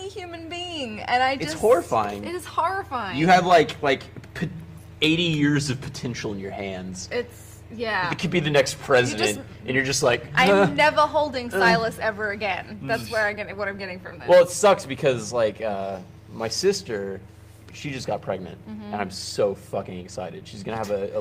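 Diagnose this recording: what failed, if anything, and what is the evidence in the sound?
Nothing audible points to a failure at any stage, from the analogue wiring and converter through to storage and playback.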